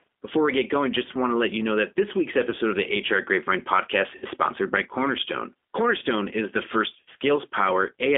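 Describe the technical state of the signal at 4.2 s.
Packets went missing around 4.16 to 4.25 s, about 60 ms of audio, which fits three 20 ms packets. The speech decoder concealed the gap by extrapolating its last pitch and filter. This VoIP packet loss concealment turns the voice into a stretched, buzzy tone or coloured noise that fades, then sounds weak as the decoder recovers. Underneath, the G.729 codec, consistent with 8 kbit/s, confines the line to 250 Hz to 3.5 kHz and gives the speech a plainly rough, synthetic edge.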